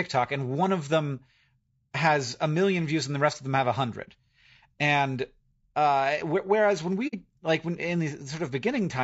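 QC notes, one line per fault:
Throughout: low-delay AAC compression. The speech sounds rough and grainy, with noise filling the gaps between harmonics and a thin, synthetic-sounding top band. This is likely AAC-ELD at a low bitrate of around 32 kbps, whose short frames resolve pitch harmonics poorly.
4.04–4.08 s and 7.07–7.15 s: AAC frame loss with muting. A brief dip opens after "of them have a" and a soft-edged hole just before "like when in". The decoder zeroed the missing frames, and the overlapping windows fade the sound out and back in. The gaps fit one and two lost frames.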